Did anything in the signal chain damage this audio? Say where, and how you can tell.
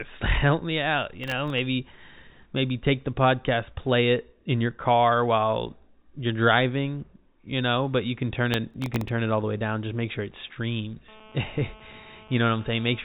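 Yes. The driver or buffer stage shows processor overload crackle at 1.24 to 1.59 s and 8.54 to 9.09 s. Gritty tearing rides on the speech. It fits about ten missed deadlines on a very short buffer, each filled with stale audio and hard edges.

The analogue wiring picked up a GSM phone buzz from 11.08 to 13.0 s. It is a steady, raspy 217 Hz buzz with many harmonics, about 24 dB below the speech. Its steadiness points to a nearby phone in a call, its radio bursts rectified by the audio circuit.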